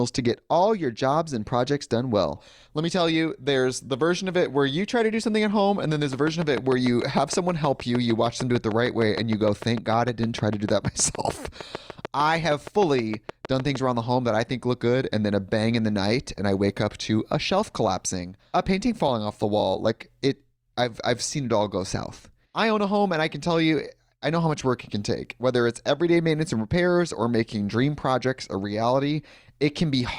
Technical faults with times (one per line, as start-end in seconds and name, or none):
6.13-13.76 train of clicks